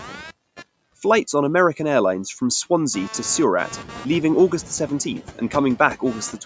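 A buzzy, chirping hum runs under the speech from start to finish, pulsing at around 200 times a second and sitting roughly 20 dB below it. This is computer activity noise: changing load in the machine shifts the audio circuit's shared ground.

Throughout, the background drops away between phrases and creeps back beneath them. These are noise suppressor artifacts from frame-by-frame band cutting that removes about 15 dB of noise.

From 3.71 to 4.28 s, just after the room noise rises sharply, the noise comes through with less reduction and then settles. This is the noise suppressor catching up. Its estimate lagged the jump, so reduction started at only about 5 dB and took 570 ms to adapt.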